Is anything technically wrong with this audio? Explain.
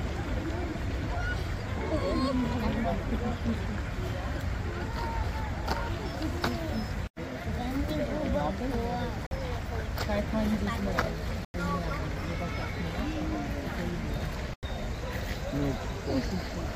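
Yes, there are three blocks of digital silence: 9.27 to 9.31 s (about 46 ms), 11.45 to 11.54 s, and 14.54 to 14.63 s (about 93 ms each). The output buffer likely wasn't filled in time, so the audio cuts straight out to silence and back with no fade. The lengths fit 2048- and 4096-sample buffers. The first sounds like a brief hole, and the longer two sound like short holes.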